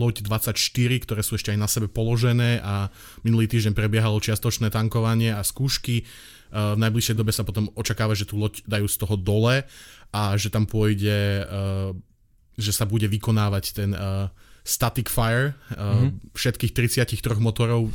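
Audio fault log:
No faults heard in this speech.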